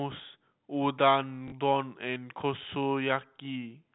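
At 1.48 s the speech catches for about 40 ms, to 1.52 s. This is packet loss with the last packet repeated: audio stopped arriving and the receiver replayed the final good chunk until the stream resumed. The gap fits two lost 20 ms packets. The replays give a robotic stutter with a 50 Hz buzz rather than the silence of a plain dropout. The 4 kHz ceiling of G.711 telephone coding runs throughout.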